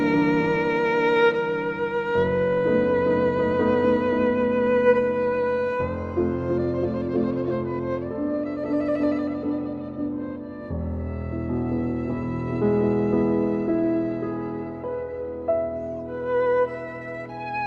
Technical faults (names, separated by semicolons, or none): none